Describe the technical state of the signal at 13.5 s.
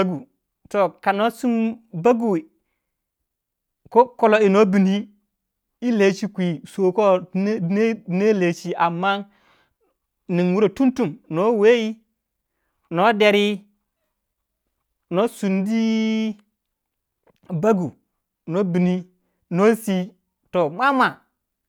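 At 13.5 s the speech signal is intact, with no fault present at that moment.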